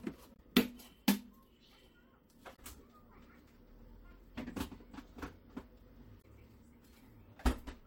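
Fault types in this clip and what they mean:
Damaged data in a compressed stream: some of the encoded data got mangled, so the decoder misreads those frames, loses sync and hunts for the next clean header. Here that's three brief blips of about 70 ms each, at 0.33, 2.52 and 6.18 seconds.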